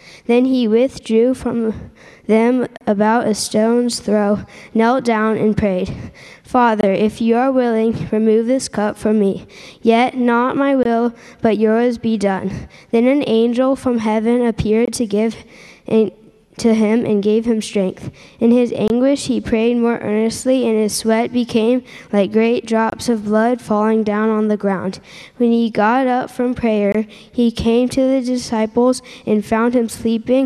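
Short silences cut into continuous sound at 2.77, 6.81, 10.83, 14.85, 18.88, 22.90 and 26.92 s. These are gaps at a join of encoded pieces, spaced every 4.0 s. The first lasts 36 ms, the rest 23 ms. Each encoded piece kept its start delay and end padding. The dropouts have smeared edges, then the sound resumes where it stopped.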